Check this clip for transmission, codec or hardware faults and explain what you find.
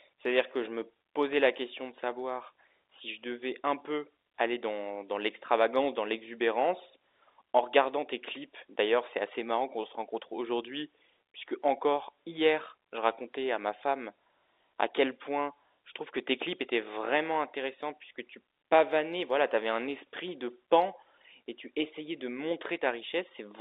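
No transmission, codec or hardware faults are present here.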